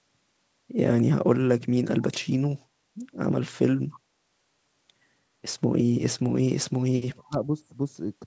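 Speech carried over a call path, band-limited at 8 kHz in a way that fits G.722 wideband coding. At 3.93 to 3.99 s a faint echo leak appears: a brief copy of the voice delayed by about 291 ms and roughly 25 dB below the speech, likely from incomplete echo cancellation at a loudspeaker end. At 6.7 to 6.82 s and 6.98 to 7.35 s the talker's voice is pushed down, at worst by around 40 dB, a sign of speech suppressed in double talk as the canceller attenuates both sides while they overlap.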